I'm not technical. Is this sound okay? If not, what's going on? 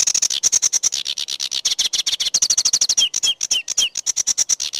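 Yes, nothing in the recording points to a technical problem.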